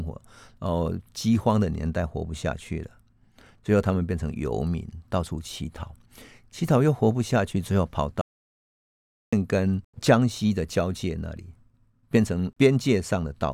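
A speech recording with one audio dropout to silence from 8.21 s to 9.33 s, where the signal stops mid-flow and about 1.11 s of speech is lost outright. The gap is silent, with no room tone or noise floor beneath it, so the waveform collapses to a flat line and the spectrogram shows a clean black band with hard vertical edges. The likely cause is a brief loss of input, such as a disconnect or mute, while recording continued.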